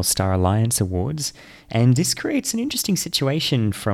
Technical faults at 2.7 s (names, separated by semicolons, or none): drift correction step